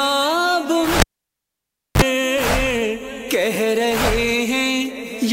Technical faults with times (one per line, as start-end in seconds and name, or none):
1.00-2.02 cable pulled and plugged in